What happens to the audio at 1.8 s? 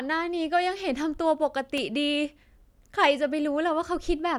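A worn or dirty contact somewhere in the signal chain loses and regains connection for a split second, producing loose connector crackle at 1.77 s. As the contact flickers open and closed, the speech signal is chopped into fragments, and any DC sitting on the line jumps with each break, adding pops. The result is a brief, irregular burst of scratchy crackle that cuts across the speech, over almost as soon as it starts.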